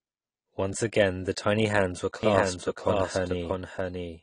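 Speech runs through the whole clip with a hard ceiling near 10 kHz. On a spectrogram, nothing appears above that line, and the band below carries the smeared, swirly texture of heavy lossy coding. The file itself is a generous MP3, so this is most likely low-bitrate audio saved at a high bitrate. A lean first encode, on the order of 32 kbit/s, removed the top band and left its artefacts, and the later high-rate pass could not restore any of it. From 2.23 s to the end there is a doubled audio track: a second, full-band copy of the speech trailing about 0.7 s behind and roughly 5 dB quieter. It has no reverb tail or room colouring, and it cuts in abruptly. In the waveform, each syllable's envelope repeats a fixed distance later at lower height, and the spectrogram shows the same harmonic patterns echoed as offset ghosts. The likely cause is a second, slower capture path or an edit that left two out-of-step copies mixed together.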